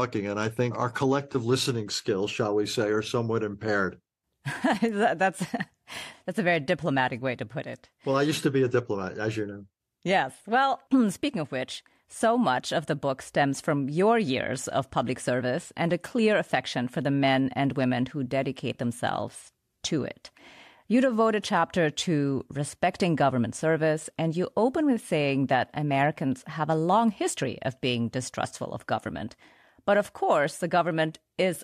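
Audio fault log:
1.33 to 1.36 s, AAC frame loss with concealment: a brief smeared, phasey patch breaks into the speech. About 20 ms of audio went missing, which fits two lost frames of the likely low-delay AAC stream. The decoder rebuilt the gap from the last good spectrum.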